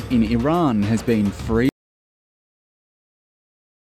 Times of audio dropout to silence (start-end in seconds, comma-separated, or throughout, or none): 1.69-3.91